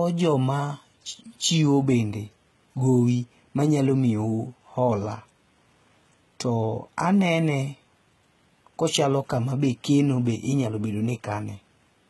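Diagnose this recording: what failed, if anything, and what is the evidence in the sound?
At the codec stage, the speech carries heavy coding damage with nothing above 11.8 kHz. The synthetic-sounding treble and gritty, lispy s sounds point to HE-AAC compression, likely at a low rate around 16 kbps, rebuilding the highs from lower bands that don't match.

At the converter or driver stage, faint regular ticks run from 0.10 s to 11.83 s, about every 0.3 s, some forty in all. These are likely clock slip clicks, one sample dropped or repeated each time unsynchronised clocks drift apart, consistent with roughly 70 ppm error.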